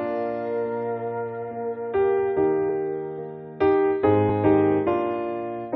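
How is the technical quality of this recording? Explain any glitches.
The recording has two small dropouts, both compressed frames skipped, at 2.68 s and 4.29 s. At each point, whole blocks of the encoded audio never reached the output, either missing from the file or rejected by the decoder as damaged, so playback jumps ahead. The first skip loses roughly 50 ms, the second roughly 20 ms, which points to about two frames and one frame of around 23 ms each.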